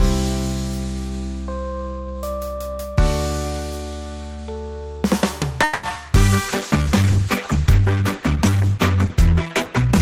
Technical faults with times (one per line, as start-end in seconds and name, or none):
5.63-5.85 call audio freeze
5.89-5.97 short concealed packet loss
6.36-6.84 jitter buffer slow-down
6.50-10.02 call bitrate drop